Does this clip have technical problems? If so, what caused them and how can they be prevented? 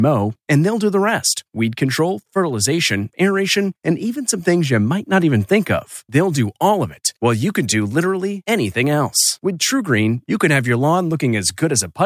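No, nothing in this recording stands out as a technical problem, so there's no cause to track down and nothing that needs preventing.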